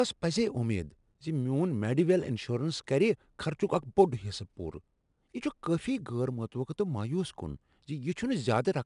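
Throughout the speech, 4-bit ADPCM compression is plainly audible. Each sample is coded as a coarse 4-bit step from a predicted value, so the quantising error becomes a gritty hiss that rises and falls with the loudness of the speech and roughens sharp onsets. Nothing is heard above 10.6 kHz, which points to a sample rate near 22 kHz. Unlike perceptual codecs, there is no swirling or warbling, only level-tracking grit.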